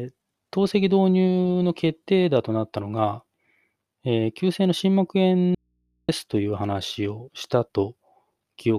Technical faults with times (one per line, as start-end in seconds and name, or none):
5.55-6.09 audio dropout to a faint residue